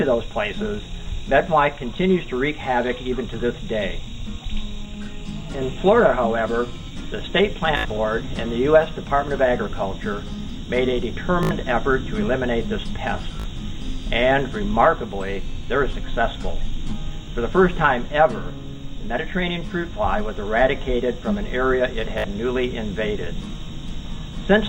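A short buzzing stutter, where a tiny slice of sound repeats in rapid machine-gun fashion, breaks the audio at 7.77–7.85 s and 11.43–11.51 s (75 ms each), 13.40–13.46 s (56 ms), 17.26 s (a single 19 ms repeat) and 22.18–22.24 s (56 ms). After each one the audio jumps ahead as though it had kept playing. This is Bluetooth stutter: packets arrived late or not at all, so the receiver replayed its last buffer. The lengths fit runs of roughly one to four lost packets of about 19 ms each.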